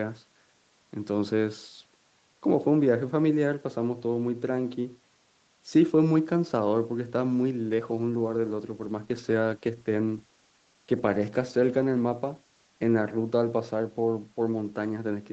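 A call bitrate drop runs from 7.71 s to 13.29 s. The call's bandwidth estimate fell, so the Opus encoder was told to spend far fewer bits on the speech, and the coarser coding leaves it rough and watery. The sound stays at its most degraded for about 5 s before recovering. The change in texture fits a fall from 32 kbps to around 18 kbps, inside a band that the call path already limits to 8 kHz.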